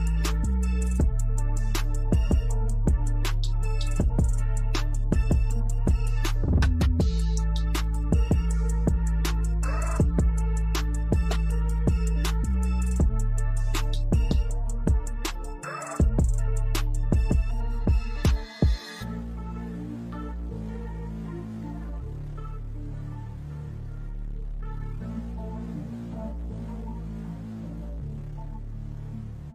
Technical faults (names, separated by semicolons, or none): none